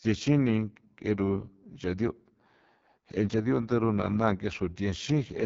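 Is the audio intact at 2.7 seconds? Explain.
No. At 2.7 seconds, as throughout the clip, the speech sounds rough and raspy, with nothing above about 7.5 kHz. This is heavy AMR wideband (HD Voice) codec damage. The vocal tract model is starved of bits, which points to the codec's lowest rate.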